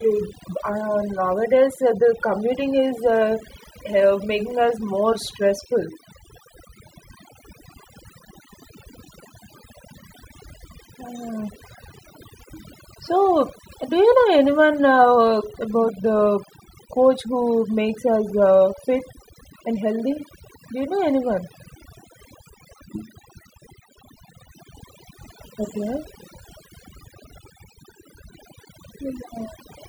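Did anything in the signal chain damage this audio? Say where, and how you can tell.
Yes. Overdone noise removal, applied at the processing stage, runs through the whole speech clip. Pauses fall to near silence with twinkling specks. An aggressive suppressor is switching off frequency bands near its noise estimate, taking quiet parts of speech with them.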